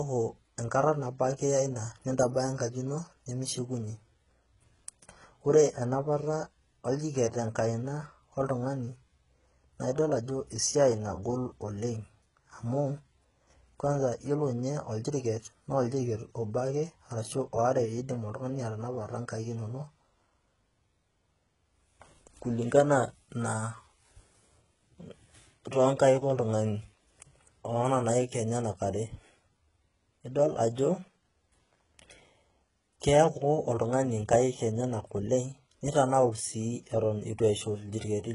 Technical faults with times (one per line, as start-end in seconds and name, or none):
0.00-38.35 HE-AAC compression